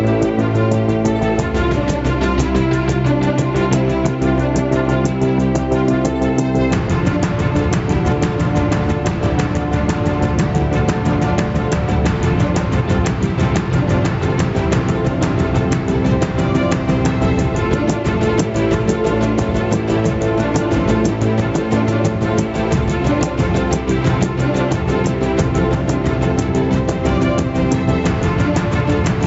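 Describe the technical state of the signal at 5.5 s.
At 5.5 s the signal shows gain pumping, present across the whole clip: the input gain is likely set far too high, so a fast limiter clamps down on each loud sound. The gain ducks by around 10 dB under each peak, leaving the sound squashed, all within a call bandwidth that stops at 8 kHz.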